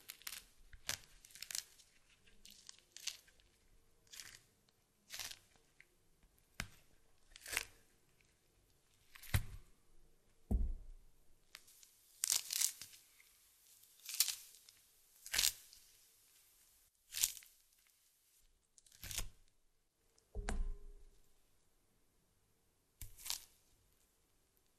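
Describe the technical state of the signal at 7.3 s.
At 7.3 s you're right near the end of a DAB burbling patch running from about 6.73 to 7.36 s. Bit errors slipped past error correction into the MP2 data, putting watery, bubbling blips into individual sub-bands. Underneath, the whole clip has plainly audible MP2 compression, likely at a rate around 80 kbps. Upper sub-bands drop out and the remaining bands are coarsely quantised, giving a dull, gurgling, granular sound.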